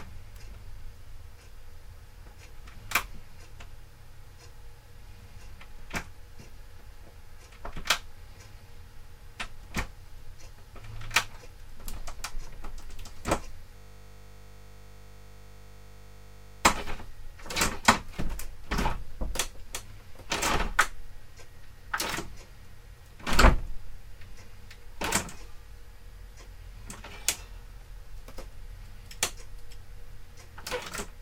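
A system hang loop runs from 13.76 to 16.65 s in this recording of sounds. The playback system froze while the audio hardware kept cycling one 20 ms stretch of its buffer, repeating it well over a hundred times and producing a steady 50 Hz buzz.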